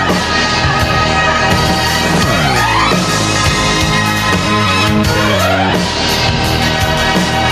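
Gain pumping runs throughout the clip. The gain swings by about 5 dB. The likely cause is input gain set far too high, with a fast limiter clamping down on peaks.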